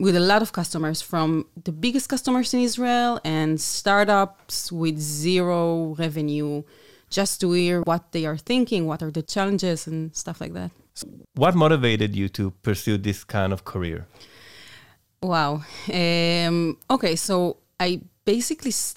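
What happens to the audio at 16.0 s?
Nothing goes wrong at 16.0 s; the speech carries on intact through that moment, with no dropout, click, distortion or other audible fault.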